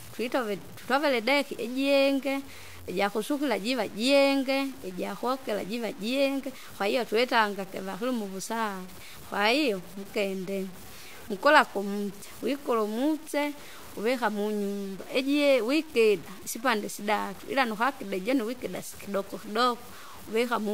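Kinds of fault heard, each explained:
Low bit depth without dither: a grainy, rasping distortion runs through the whole speech clip and rises and falls with the voice, sitting only about 25 dB below it. Quiet syllables and decays turn gritty or sputter out to silence, which points to roughly 7 bits, likely truncated with no dither. Unlike steady hiss or properly dithered noise, the grit vanishes in pauses and changes character with each sound.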